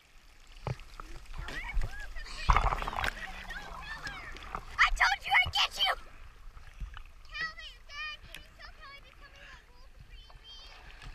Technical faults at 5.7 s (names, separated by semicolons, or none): none